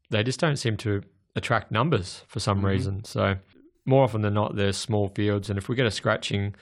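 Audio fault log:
No faults: the speech signal remains continuous and stable, with no audible disturbance anywhere in its recording or transmission path.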